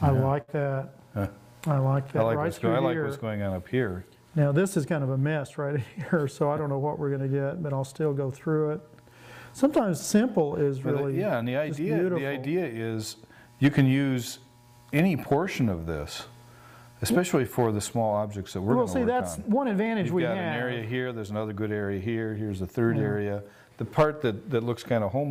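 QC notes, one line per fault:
0.41–0.50 s, burst of packet loss: several consecutive packets go missing, so the receiver stretches the preceding sound for about 63 ms, repeating it as a held, fading tone or hiss, then jumps ahead, skipping about 60 ms of the sound. Unlike a plain dropout, there is no silent hole. Unlike a single lost packet, the concealment lasts long enough to hear the smeared, decaying tail and the abrupt resumption.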